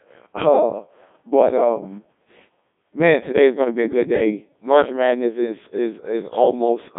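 From start to finish the speech is coded by a Codec 2 vocoder, with heavy damage. The decoder rebuilds each voice from sine waves driven by pitch, voicing, energy and a coarse spectral envelope, so the original waveform is lost and the voice comes out robotic and buzzy. The coding is at 1.2 kbit/s. The sound sits in a line band of 150 Hz to 3.6 kHz, with nothing above 3.7 kHz.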